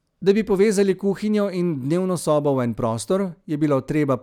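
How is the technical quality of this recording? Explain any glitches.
No glitches can be heard anywhere in the recording. The speech runs without any audible interruption or defect, so there is nothing to explain.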